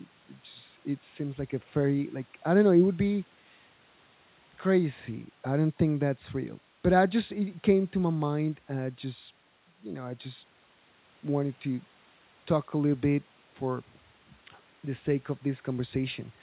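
Nothing goes wrong anywhere in this speech; it simply has the narrowband phone-call sound of a call path with nothing above 4 kHz, which fits a G.711 mu-law codec.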